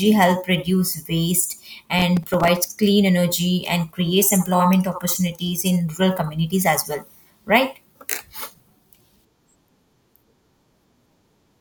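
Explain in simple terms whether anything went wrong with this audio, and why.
From 1.99 to 2.68 s, a gritty crackle tears through the speech and then stops. This is processor overload crackle: the computer fell behind and missed about twenty short deadlines, each leaving a tiny silent gap that fits roughly 3 ms audio chunks.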